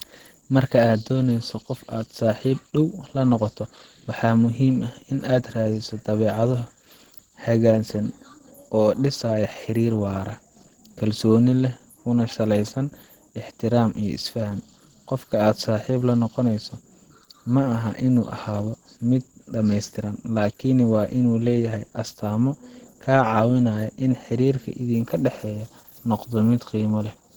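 A speech recording carrying plainly audible Opus compression damage throughout, likely from low-rate encoding around 16 kbps in the hybrid speech mode. The voice sounds hoarse, rough and grainy, with the top band noise-filled rather than detailed, even though content extends to about 20.1 kHz.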